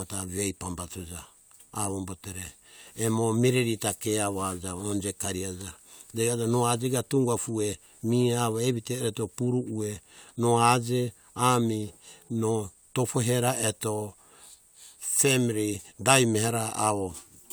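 No technical faults can be heard anywhere in this recording.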